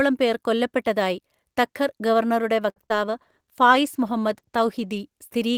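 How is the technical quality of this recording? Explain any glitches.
Network glitches affect the middle and latter part of this speech recording: a brief hold, two small dropouts, then a stretch of reduced quality.

From 2.70 to 2.78 s there is a short stall from a late packet. The jitter buffer ran dry, so the receiver stretched the last sound for 66 ms until the data arrived, then resumed where it left off. Nothing is lost, but the sound hangs unnaturally long.

Right after "തഖർ ഗവർണറുടെ", short concealed packet loss follows at 2.86 to 2.90 s and 2.90 to 2.92 s, about 20 ms missing each. The first gap is bridged by extrapolating the preceding sound, giving a small smear. The second is skipped outright, a slight jump that also takes back some of the earlier delay.

From 3.07 to 5.07 s a call bitrate drop takes the encoder from 32 to 17 kbps, staying at the lowest rate for about 1.9 s. 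With far fewer bits the speech is coded more coarsely, so it sounds rougher and more watery until the rate recovers.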